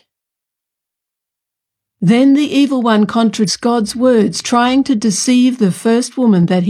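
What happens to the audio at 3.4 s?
Compressed frames are skipped at 3.44 to 3.50 s: a run of frames, which fits about seven 46.4 ms frames, is lost or rejected by the decoder, so the speech jumps ahead by roughly 300 ms.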